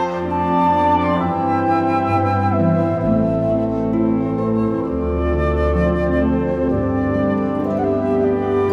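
No technical faults can be heard anywhere in the recording; the signal stays continuous throughout.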